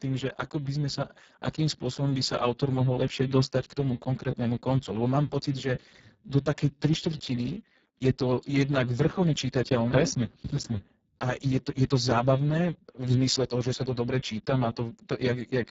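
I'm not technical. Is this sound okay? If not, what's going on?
No. From start to finish, the speech was squeezed through the Speex codec, an old internet-calling compressor, at a very low quality setting. Too little detail survives, so the speech sounds hoarse and noisy, and the crisp top end stops near 7.7 kHz.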